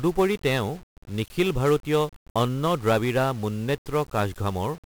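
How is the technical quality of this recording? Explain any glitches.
Poor, because of one fault that runs through the whole speech clip. The audio was coded with 1-bit DFPWM compression, which fits a stream of about 48 kbps. Each sample's single bit nudges an adaptive level up or down, leaving heavy broadband quantisation noise that makes the voice fuzzy and crackly, with the treble buried in hiss.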